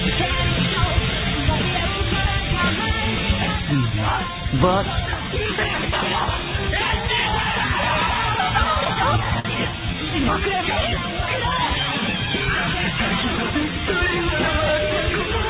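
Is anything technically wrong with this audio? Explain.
Yes. Between 8.75 and 9.48 s the audio has repeated stalls (stutter). Packets arrived late, so the jitter buffer ran dry six times. Each time the receiver stretched the last sound, concealing 92 ms in all with gaps up to 51 ms and nothing lost. The result is a dragging, hiccuping stutter. On a waveform this looks like short repeated or smeared stretches, and on a spectrogram like brief smeared bands. The call path itself shows a hard ceiling at 4 kHz, which fits G.711.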